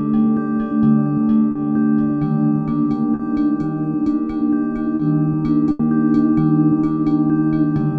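Short concealed packet loss shows up three times, at 1.51 s, 3.15 s and 4.95 s. Each time about 40 ms of audio failed to arrive in time, and the receiver patched the hole by extending the sound just before it and then blending back. Each patch lasts about 70 ms in all and passes as a quick smear or wobble rather than a silence. It is too short for the patched sound to fade, which separates it from the longer loss that follows.

A burst of packet loss runs from 5.71 s to 5.82 s. Here about 80 ms went missing in a row, several packets' worth. The receiver again carried the last sound forward but lowered it as the gap went on, so what comes through is a held buzz or hiss that fades. The audio then picks up further along, with that stretch simply gone. The fading tail and the audible jump mark it as a burst and not a brief concealed drop.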